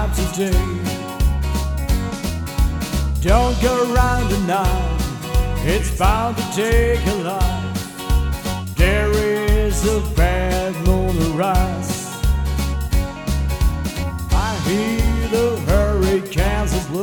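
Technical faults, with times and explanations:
Nothing stood out on listening to this recording.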